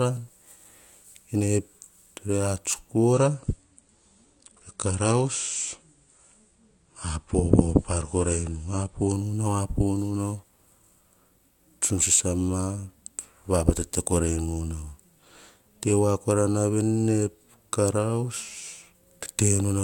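An adaptive stream at a lower bitrate runs from 3.13 s to 9.13 s, starting just after "re ats" and ending just before "nu nau apo nu". For those six seconds the connection could not sustain the higher-quality version, so playback switched to a thinner encoding, which sounds like a drop from around 96 kbit/s to around 32 kbit/s AAC. Nothing above 9.8 kHz remains, so the speech turns dull and more smeared. The quality changes abruptly at both ends, with no gap.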